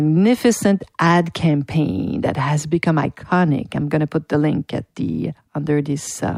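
No technical faults can be heard anywhere in the recording.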